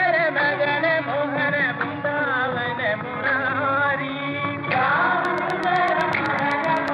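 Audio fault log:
5.25–6.89 s, train of clicks: a steady ticking about 8 times per second, evenly spaced, around fifteen sharp pops in all, each much like the last and standing out roughly 10 dB above the sound, audible through quiet moments as well. Near-identical, regularly timed pulses laid over the audio rather than growing out of it point to an outside source, most likely interference from nearby equipment or a faulty connection or power supply injecting a repeating spike into the signal path.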